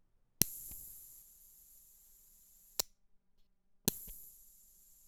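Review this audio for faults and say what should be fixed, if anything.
From about 1.22 s to the end there's channel delay comb filtering: one side runs around 5 ms late, so the mono sum cancels at evenly spaced frequencies from roughly 100 Hz up, leaving the sound hollow and phasey. Check channel alignment and mono compatibility before folding down.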